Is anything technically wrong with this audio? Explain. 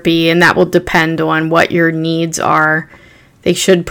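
Yes, the speech has hard clipping from 2.43 to 2.65 s. Peaks there run about 2 dB past what a stage can pass and are sliced flat, adding high harmonics that crackle on the loudest moments. Unlike soft saturation, the edges are abrupt rather than rounded.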